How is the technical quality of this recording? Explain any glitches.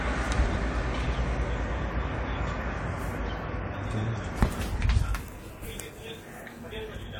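No glitches or faults detected.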